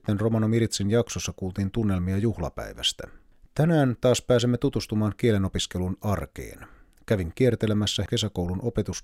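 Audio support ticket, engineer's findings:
No faults found in the speech audio on inspection.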